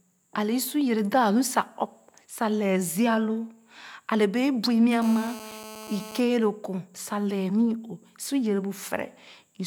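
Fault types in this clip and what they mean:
GSM phone buzz: a hard, raspy 217 Hz buzz, about 15 dB below the speech, from 5.02 to 6.20 s; a nearby 2G phone's bursts rectified by the circuit.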